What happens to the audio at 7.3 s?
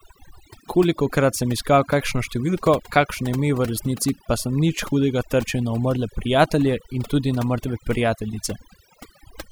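At 7.3 s the speech carries overdone noise removal, present across the whole clip. A noise reducer set too aggressively cuts frequency bands close to its noise estimate. The background drops and breaks up into twinkling specks. On a spectrogram this appears as a blotchy, gapped texture with scattered isolated points in the quiet regions.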